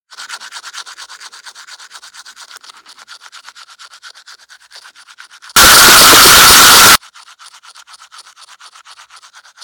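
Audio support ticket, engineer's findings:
Signed and unsigned mixed up, 5.56 to 6.95 s. Sudden very loud harsh buzz, quiet moments as loud as peaks. Likely 16-bit sample format mismatch in decoder or converter: top bit flipped, zero crossings jump across full range. Unlike clipping, loudness doesn't track level.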